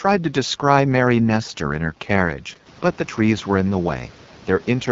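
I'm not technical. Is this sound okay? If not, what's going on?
No. The speech has been squeezed through the AMR wideband (HD Voice) codec at a very low setting, so it sounds rough and raspy all the way through. The background room noise that gets louder around halfway through is just the room itself.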